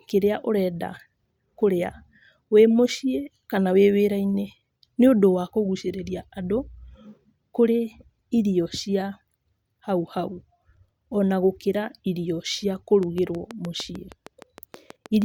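Speech, with a train of clicks from 13.03 to 15.23 s: around fifteen regular pops at 6.4 per second, louder than the voice, likely from interference or a faulty connection.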